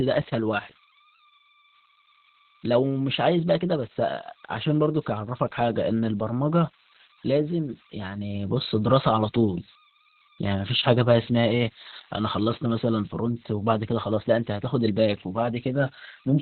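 Converter idle tones run through the whole recording. A faint whistle sits near 1 kHz, about 27 dB below the speech. It is clearest in the pauses and turns grainy under quiet passages. The cause is an undithered delta-sigma converter. With only a small input, its modulator settles into repeating bit patterns. Those patterns form steady tones, and the pitch depends on the input's DC offset.

Opus voice compression also affects the entire clip, and the damage is heavy. Nothing is present above about 4.3 kHz, so the speech is squeezed into a narrow band. It sounds muffled, hoarse and somewhat robotic. This points to the SILK linear-prediction coder in narrowband mode, which fits a bitrate near 8 kbps. At that rate the excitation is coded coarsely, likely in 20 ms frames, and that leaves the rough, buzzy texture.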